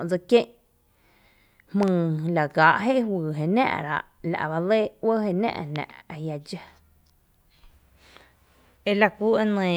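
A loud pop arrives at 1.83 to 1.90 s as two quick pulses, then again as a single pop from 5.76 to 5.78 s, each peaking about 10 dB above the speech. A sudden voltage step, likely from a plug, switch or static discharge, was added to the signal. Unlike a dropout click or clipping, the speech carries on unbroken beneath a sharp pop or thump rather than being cut or distorted.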